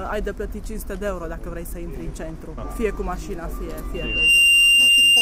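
At 3.94 s a loudspeaker feedback squeal begins: a steady 2.8 kHz tone swells over a fraction of a second to about 15 dB above the program and holds until the end. The microphone is re-amplifying its own loudspeaker, with loop gain exceeding unity at that frequency.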